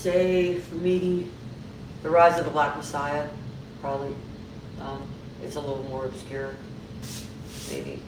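No technical faults can be heard anywhere in this audio.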